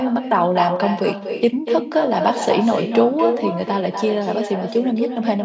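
Speech on a call, band-limited to 8 kHz by normal call processing, with echo with no canceller throughout: the far end's loudspeaker feeds its microphone, returning every phrase about 6 dB quieter roughly a fifth of a second later, visible as smeared duplicate envelopes and spectrogram streaks trailing each burst.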